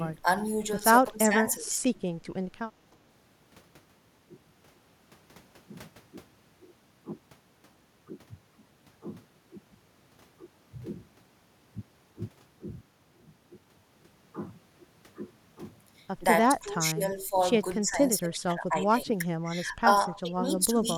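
The speech dips at 1.12–1.89 s, then again at 16.61–17.34, 17.8–19.08, 19.34–19.89, 20.07–20.46 and 20.66–20.88 s. Drops reach roughly 10 to 20 dB. This is speech suppressed in double talk. Likely the echo canceller could not separate this side's talker from the loudspeaker echo of the far side and turned both down.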